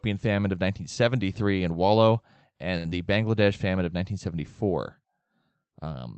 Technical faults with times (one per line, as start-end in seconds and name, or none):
2.77-2.87 short stall from a late packet
2.89-2.93 short concealed packet loss